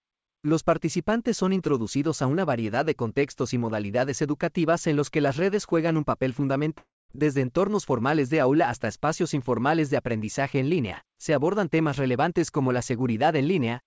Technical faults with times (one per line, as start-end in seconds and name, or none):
6.78-7.11 long network dropout